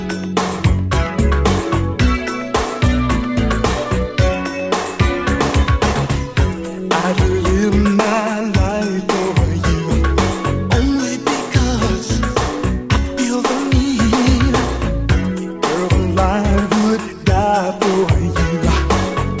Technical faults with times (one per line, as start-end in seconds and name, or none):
none